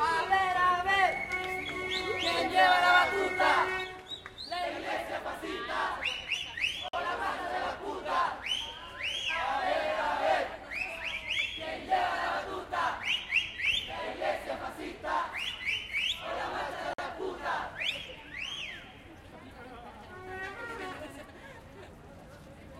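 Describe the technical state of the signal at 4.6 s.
At 4.6 s the level sits about 5 dB lower after a sudden gain jump at 3.84 s that holds to the end. The drop is a single-sample step, likely a gain change applied without a ramp. Unlike a fade, there is no gradual slope, and the background noise falls by the same amount at the same instant.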